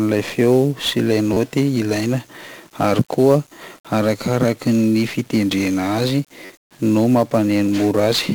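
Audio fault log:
Throughout: 1-bit DFPWM compression. The whole speech track has that heavy fuzzy, crackly texture, with the top end buried under hiss. With only one bit per sample nudging an adaptive level up or down, the coder can't follow the waveform closely, so strong broadband quantisation noise rides on everything. The damage is heavy, about what you'd expect from DFPWM at something like 48 kbps.
1.33–1.37 s and 6.45–6.50 s: repeated buffer. Right after "feo sy ilay" you get a quick buzzy stutter where a 10.67 ms chunk replays about three extra times, and at 6.45 s it loops about four more times. Fresh audio didn't arrive in time, so the device kept replaying its last buffer, with a hard join at each repeat. That short size fits a 512-sample buffer, and roughly 30 and 40 ms of real audio go missing.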